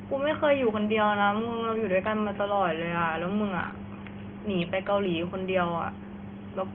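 Nothing goes wrong in this recording of speech, and the only other thing to hear is the quiet background of the room itself, sitting about 32 dB below the talking, which is just part of where the microphone was.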